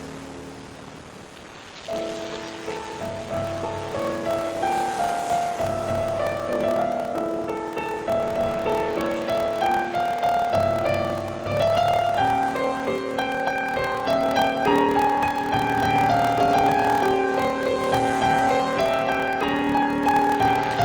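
A block size mismatch (padded) runs throughout: one stage writes shorter blocks than the next reads, which fits 1024-sample blocks, and each shortfall is filled with silence. The gaps produce a steady 38.3 Hz buzz, and the audio plays at 0.889 times normal speed with its timbre intact.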